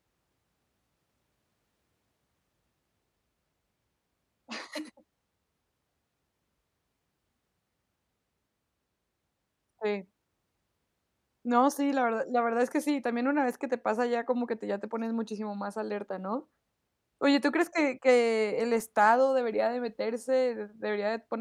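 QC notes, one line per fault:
No faults found in review.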